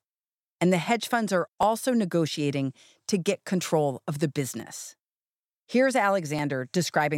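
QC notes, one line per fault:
1.63, 4.60 and 6.39 s: dropped samples. Three single sharp clicks occur, the first between "the hedge funds are" and "negotiating to get control", and the second just after "get control of the". Each likely comes from under a millisecond of missing samples. The waveform jumps, but nothing audible is lost.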